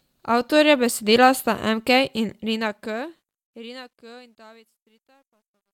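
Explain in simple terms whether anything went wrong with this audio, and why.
Something did go wrong at the end of this speech clip: truncation distortion on a fade. From about 2.30 s the sound fades out, which is normal, but the fade keeps too few fine level steps, which fits a 12-bit stage with no added smoothing noise. As the level drops, the sound turns gritty, and from 4.27 s to the end it is at its worst. Unlike clipping, the damage grows as the sound gets quieter, not louder.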